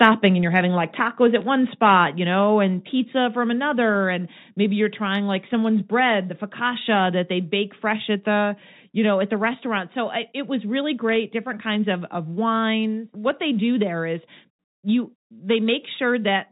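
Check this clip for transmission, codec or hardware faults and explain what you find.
Yes, there are three kinds of fault here, all in an otherwise G.711 mu-law phone path whose coding damage is faint at most.

Microphone overload comes first, at 0.01 to 0.1 s and again at 1.84 to 1.94 s, just before "you know and". The tops of the loudest peaks are flattened, about 4 dB over the limit the first time and about 1 dB the second, so a small slice of samples gets squared off. That sounds like a gritty, crackly edge on those peaks, most likely from the mic input gain being set too hot for the converter.

Microphone volume stepped down shows up three times, at 1.02 s, 2.04 s (right before "you know and") and 3.06 s. Each time the whole level, background included, drops about 2 dB in one go. Coming after those clipped peaks, it is likely the call software noticing the overload and nudging the input gain down a notch each time. 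You hear it as small, sudden dips in loudness with no fade.

Bit errors on a digital phone line hit at 1.42 s and again at 11.09 to 11.16 s, just after "I it was really". The error rate is only a fraction of a percent, but on G.711 every flipped bit corrupts one 8-bit sample. When a sign or high-order bit flips, that sample jumps far off, which gives a sharp tick. A cluster of them gives a short burst of crackle laid over the speech, and the speech underneath comes through intact.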